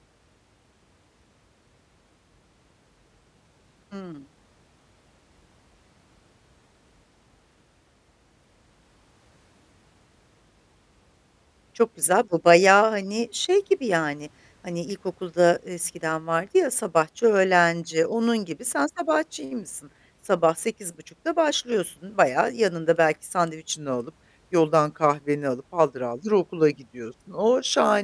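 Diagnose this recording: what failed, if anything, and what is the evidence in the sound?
Wrong sample rate from 23.73 s to the end at 28.03 s: the speech abruptly slows and drops in pitch by about 1.5 semitones, running at 0.919 of normal speed. Speed and pitch fall together by the same ratio, which places the fault at the playback or converter clock stage, where samples were clocked out slower than they were captured without resampling. The ratio fits 24 kHz material played at 22 kHz.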